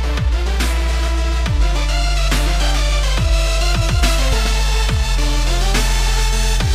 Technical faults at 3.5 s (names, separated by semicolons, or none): none